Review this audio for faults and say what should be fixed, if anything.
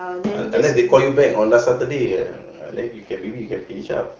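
AMR rate drop, from 2.06 s to the end: the speech abruptly turns rougher and more synthetic while its bandwidth stays the same and nothing drops out. This fits the network forcing the AMR wideband codec from the clean-sounding 23.85 kbit/s down to 8.85 kbit/s, trading speech bits for error protection on a weak radio link. Preventing it means improving radio coverage or signal quality on that call path so the link can hold the higher rate.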